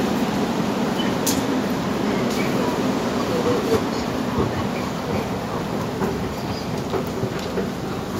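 No technical faults can be heard anywhere in this audio.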